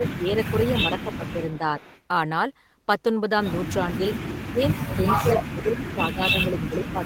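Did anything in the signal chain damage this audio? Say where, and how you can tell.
Yes. The speech dips and breaks up in pieces at 0.0–0.55 s, 0.9–1.64 s, 3.95–4.1 s, 4.43–5.35 s and from 5.51 s to the end, sinking by up to about 30 dB. This is call processing, likely speech suppressed in double talk: the echo canceller couldn't separate talker from far-end echo and attenuated both.

Faint delayed copies of the voice surface at 1.27–1.31 s, 1.49–1.58 s and 1.8–2.02 s, about 25 to 30 dB below the speech and trailing it by 405 ms. This is also call processing, likely an echo leak: a loudspeaker echo the canceller didn't fully remove, sent back down the line.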